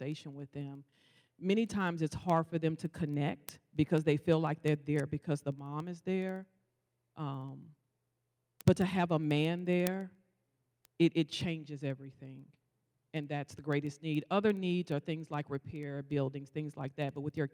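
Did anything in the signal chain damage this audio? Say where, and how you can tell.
Yes. From 0.12 s to the end at 17.53 s, sharp ticks of uneven strength run through the speech at a steady rate of roughly one every 70 ms. These are word clock ticks at the digital link: the receiving clock drifts, fitting an error near 300 ppm, so single samples slip.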